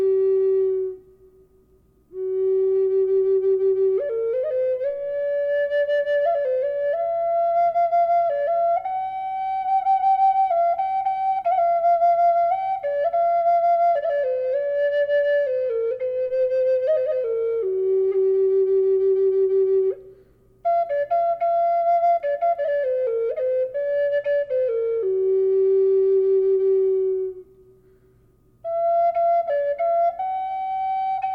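From 13.84 to 16.31 s and again from 24.13 to 26.60 s, the audio shows a Bluetooth SBC bit pool drop. The treble dulls and a gritty noise rises. Starved of bits, the top sub-bands thin out. This fits a bit pool fall from 28 to 13, near 102 kbps.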